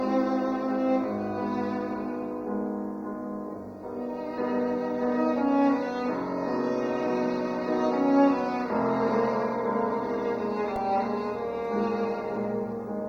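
At 10.76 s a repeated buffer occurs: new audio arrived late, so a tiny block of about 1.45 ms, which fits a 64-sample buffer, played four extra times. It sounds like a brief click or buzz, and the waveform shows identical repeated cycles with hard joins, forming a vertical streak on a spectrogram.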